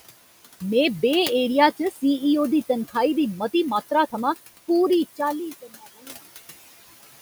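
Noise suppressor artifacts run through the whole clip. The suppressor pulls the room noise down by about 16 dB, frame by frame, wherever it judges the noise steady. That noise, about 17 dB below the speech, dips in the gaps and swells back under the voice.

From 1.77 to 2.02 s, just before "दी तनखाही दी मती", there is speech cut by the noise suppressor. It mistakes quiet speech for noise and turns it down by up to about 14 dB. Roughly 150 ms of sound comes out faint and swallowed.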